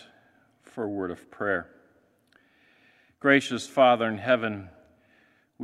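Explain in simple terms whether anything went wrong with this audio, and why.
Nothing went wrong with this audio, because no fault can be heard anywhere in it.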